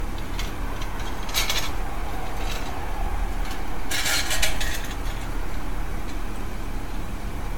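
Right from the start the whole recording has a grainy, rough edge that moves with the sound itself. It gets coarser as things get quieter, and the faintest bits break up or sputter rather than fading smoothly. That's low bit depth without dither, likely from truncating to something like 7 bits with no dither to decorrelate the error, so the distortion tracks the signal and sits only about 25 dB under it.

Layered on top, and also running the whole way through, there's a swirly, hollow, smeared quality, and transients lose their snap. Nothing comes through above 17 kHz. The result sounds worse than a single decent lossy encode should, which points to generation loss, likely from passing through AAC-LC several times over at around 96 kbit/s. Each re-encode lands on a fresh frame grid, so the holes and noise pile up.

From 1.44 s to 7.53 s there's a steady run of small ticks, one every 0.124 s, around fifty in all. 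Each is a tiny skip of roughly a millisecond where audio simply goes missing and the signal jumps ahead. Because they're so evenly spaced and only show up while there's sound, they fit periodic USB or driver dropouts, where something blocks the audio path on a fixed schedule.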